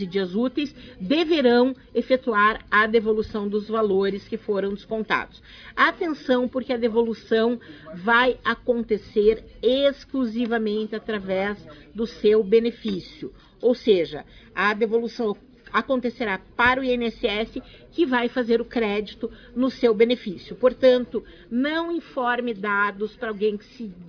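No technical faults can be heard anywhere in this audio. Nothing in it calls for a time mark or a measured value.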